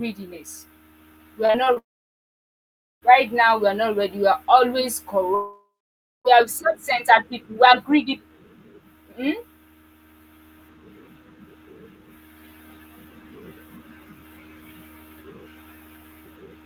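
From 1.45 to 1.78 s there's a burst of repeated packet loss with a robotic sound. There are four short holes, the longest about 34 ms, each patched by stretching the last bit of sound. About a third of that stretch is concealed, so it turns choppy.

Right after, from 1.78 to 3.04 s, the audio cuts out for what is likely a long network dropout. The fill dies off quickly and leaves about 1.2 s of silence before the sound resumes with that chunk gone. The same thing happens from 5.35 to 6.27 s, where a brief smeared tail gives way to roughly half a second of silence.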